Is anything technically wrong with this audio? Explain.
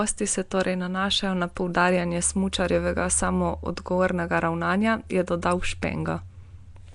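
Yes. The whole speech clip has a rough, hissy halo and a smeared, underwater quality, with nothing above about 10.6 kHz. That's likely Nellymoser compression, Flash's old microphone codec, at a rate that fits roughly 44 kbps. Weak bands got no bits and were filled with noise.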